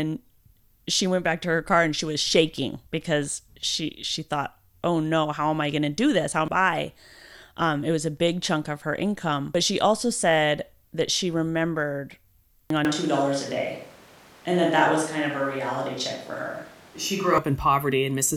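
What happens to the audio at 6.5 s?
At 6.48 s there's a brief blip from damaged data in the compressed stream. Corrupted bytes make the decoder misread the frame there and lose sync, so it hunts for the next good frame header, and that comes out as a quick glitch.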